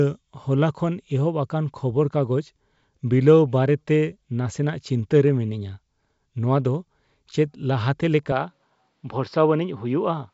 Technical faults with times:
8.32-10.34 input switched to a poorer device

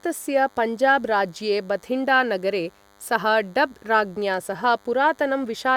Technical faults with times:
0.00-5.77 DECT cordless phone buzz

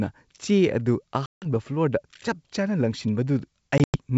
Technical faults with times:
1.26-1.46 packet loss on an ADPCM call
3.78-3.97 packet loss on an ADPCM call

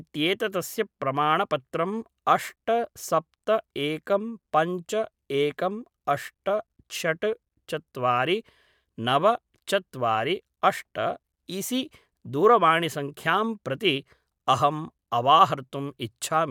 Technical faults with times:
none

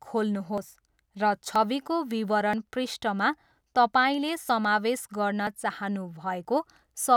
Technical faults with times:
0.58 audio missing between chunks
1.56 audio missing between chunks
2.53 audio missing between chunks
4.49 audio missing between chunks
5.47 audio missing between chunks
6.45 audio missing between chunks

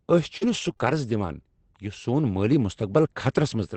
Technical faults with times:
0.37-0.95 repeated packet loss (robotic sound)

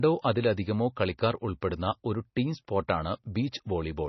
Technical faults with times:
0.00-4.09 MP3 compression

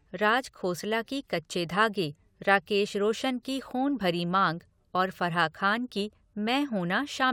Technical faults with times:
none

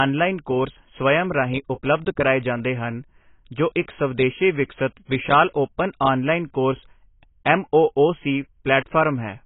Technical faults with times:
0.00-9.45 AAC compression

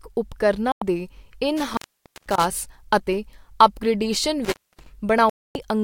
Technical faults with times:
0.72-0.82 digital broadcast dropout
1.57-2.45 intermittent contact
4.45-4.86 intermittent contact
5.29-5.55 digital broadcast dropout

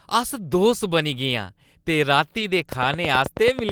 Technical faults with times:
2.37-2.43 lost packet rebuilt from error correction
2.72-3.72 train of clicks

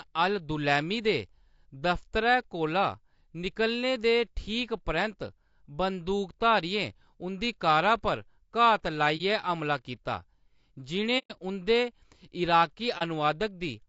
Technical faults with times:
0.00-13.88 low-delay AAC compression
9.17-9.21 AAC frame loss with muting
11.18-11.31 AAC frame loss with muting
12.98-13.02 AAC frame loss with muting

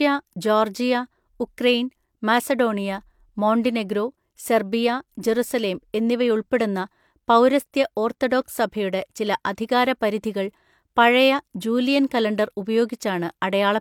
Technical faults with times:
none

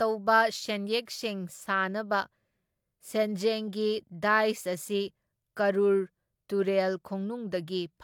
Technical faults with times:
none

